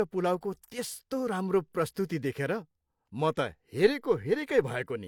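Low-bitrate audio saved at a high bitrate, throughout: the speech keeps coding artefacts and nothing above 18.5 kHz, likely from low-bitrate HE-AAC re-saved as high-rate MP3.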